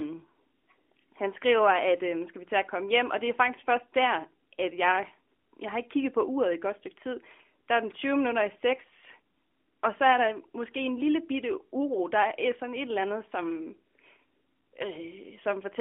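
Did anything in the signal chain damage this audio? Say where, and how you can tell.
No, nothing damaged this audio.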